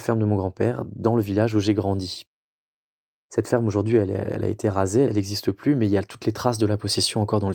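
No technical faults can be heard anywhere in this speech recording.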